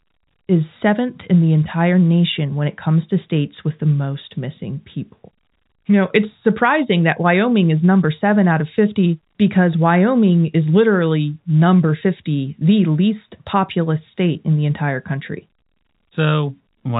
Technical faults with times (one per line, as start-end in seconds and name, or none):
none